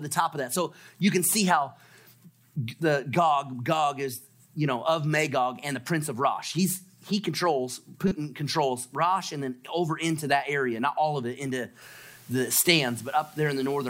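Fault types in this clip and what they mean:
corrupt frame decoded: a single damaged frame played anyway, a brief, fairly loud glitch near 8.08 to 8.12 s, one isolated burst rather than recurring dropouts or clicks.
low bit depth with dither: 8-bit rounding with dither gives a steady, even hiss from 11.82 s to the end, quite high against the signal, with no harsh distortion as undithered truncation would produce.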